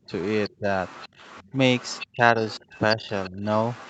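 Speech suppressed in double talk, from 0.05 to 1.58 s: the speech repeatedly sinks, at worst by around 20 dB, for roughly a third of a second in total, thinning and breaking up in places. This is likely the echo canceller meeting both talkers at once. Unable to separate the near talker from the loudspeaker echo, it turned everything down together.

The other side's voice leaking through, from 0.19 s to the end: a second voice runs underneath, around 20 dB below the main speech. The far-end audio played on the loudspeaker was likely picked up by the microphone, and the echo canceller failed to remove all of it, leaving a faint extra talker throughout.

Speech suppressed in double talk returns from 2.12 to 3.44 s. The main speech again dips by around 20 dB for roughly half a second altogether, likely as the canceller clamps down while both sides sound at once.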